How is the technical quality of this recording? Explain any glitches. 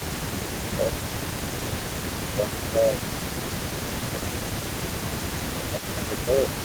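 The recording has two related faults from a hands-free call: the speech keeps dipping in level, and a faint delayed copy of it runs underneath throughout.

Speech suppressed in double talk occurs from 0.0 to 0.92 s, 1.43 to 3.44 s, 3.82 to 4.64 s, and 5.52 s to the end. The speech drops by up to about 10 dB, with roughly half a second to a second and a half affected per stretch, most likely because an echo canceller mistook overlapping talk for echo and ducked it. The sound dips, thins or cuts out in pieces.

Echo leak runs the whole clip. A second copy of the speech trails about 254 ms behind, roughly 15 dB quieter, likely from loudspeaker sound reaching the far microphone without being fully cancelled. Unlike room reverberation, it is a distinct repeat rather than a smooth decay.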